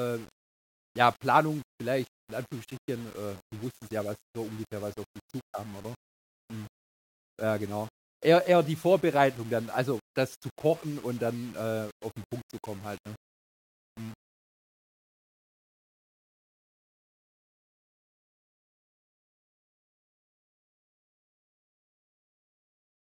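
Low bit depth without dither runs through the whole speech clip, from start to end. The sound has a grainy, gritty distortion that rises and falls with the speech itself, roughest on quiet syllables and decays, sitting roughly 25 dB below the signal. The likely cause is quantisation to about 7 bits by plain rounding with no dither, so the rounding error tracks the waveform instead of forming a steady hiss, and the faintest passages break up into sputtering steps.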